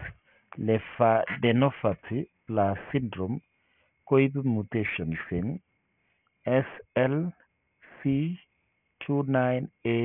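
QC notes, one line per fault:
Throughout, aliasing: the speech was brought down to a rate that points to about 6 kHz with no anti-alias filter, so content above the 3 kHz fold point mirrors back as false, unrelated tones about 15 dB below the signal, making sibilants gritty and metallic.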